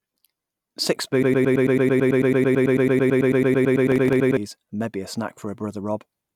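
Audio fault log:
1.23 to 4.37 s, broken-record loop: a fragment of about 110 ms repeats back to back, identical each time, for about 28 repetitions, and the sound that should have played across those three seconds never arrives. The player or stream most likely stalled and kept resending the last piece it held. Unlike a stutter or an echo, the repeats don't decay, drift or resume where they stopped.
3.92 to 4.16 s, processor overload crackle: a brief gritty tearing rides on top of the looping sound for about a quarter of a second. The audio thread is missing its deadlines, and each short buffer, which fits roughly 3 ms, is replaced by stale audio with hard edges, several in a row. Clipping distortion follows the waveform's peaks, and a single dropout is one clean gap. This crackle is a cluster of tiny splices that stops once the load clears.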